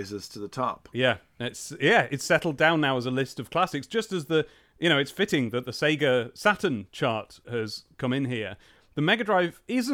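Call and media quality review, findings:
Nothing to flag here; the speech comes across steady and intact throughout, with no audible glitches or problems worth a ticket.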